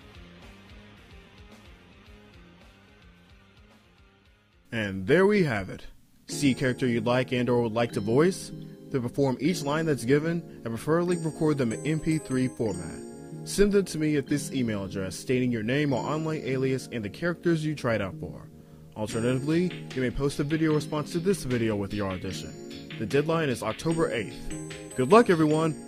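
No technical faults can be heard anywhere in the audio; the signal stays continuous and stable throughout.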